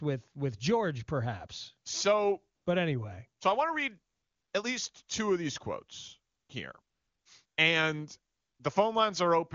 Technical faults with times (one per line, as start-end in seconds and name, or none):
2.55-2.65 AMR comfort noise
4.13-4.53 AMR comfort noise
6.33-6.49 AMR comfort noise
6.81-7.57 AMR comfort noise
8.33-8.59 AMR comfort noise